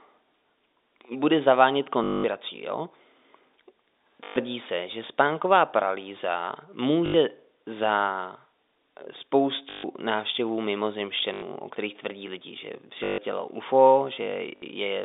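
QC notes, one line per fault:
2.04 to 14.62 s, packet loss with last packet repeated: seven dropouts at 2.04–2.24, 4.24–4.36, 7.06–7.14, 9.70–9.84, 11.34–11.42, 13.04–13.18 and 14.56–14.62 s, lasting 60 to 200 ms. The receiver replays its last packet until new ones arrive. The repeats don't line up with the pitch. Longer runs buzz at 50 Hz, which fits 20 ms packets. Each is a short robotic stutter in the narrowband telephone speech.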